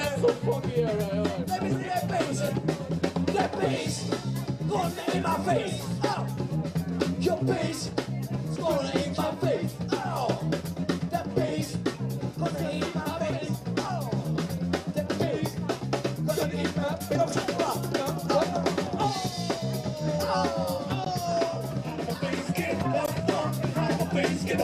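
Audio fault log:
No audible faults anywhere in this clip.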